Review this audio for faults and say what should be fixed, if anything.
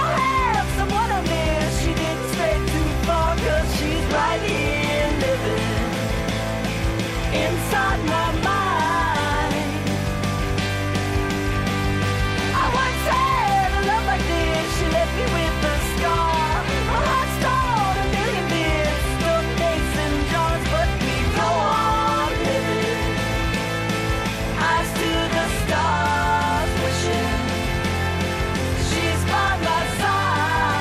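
Nothing in this audio needs fixing. No technical faults turn up anywhere in it, so there is nothing to correct or guard against.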